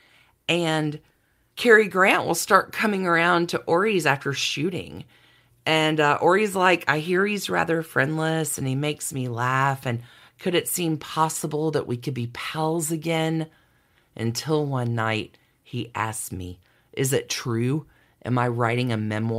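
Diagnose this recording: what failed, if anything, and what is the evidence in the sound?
Nothing in the recording points to a failure at any stage from capture and conversion through to playback, and the speech signal stays continuous and stable throughout.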